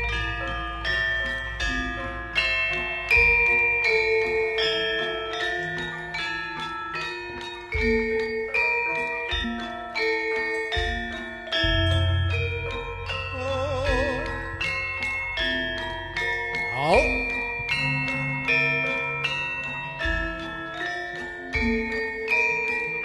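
At 9.43 s there is a single instance of damaged data in a compressed stream. A short run of corrupted bytes leaves the decoder unable to parse the frame there, so it loses sync and hunts for the next valid header, producing a brief blip in the sound.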